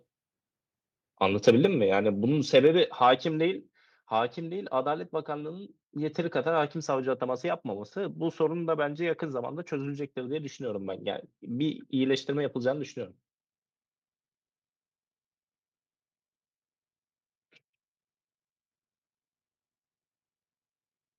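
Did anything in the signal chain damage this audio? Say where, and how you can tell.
Yes. Microphone overload at the converter stage, 1.47 to 1.65 s: the loudest syllables acquire a harsh, crackling edge where peak tops are flattened. The input likely ran about 2 dB past full scale, so a small fraction of samples were clipped.

Microphone volume stepped down twice, at 1.65 s and 3.69 s, a call-processing gain adjustment: both speech and background drop abruptly by about 3 dB each time, the first immediately after the distorted peak, consistent with software reacting to clipping.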